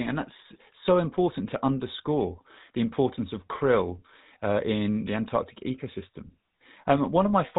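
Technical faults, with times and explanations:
Throughout: GSM full-rate codec. The speech has a plainly audible buzzy, gravelly roughness, because the vocal tract is modelled and driven by a coarse, regularly spaced pulse excitation, which fits a 13 kbps codec. Nothing passes above 3.8 kHz, so the sound is band-limited.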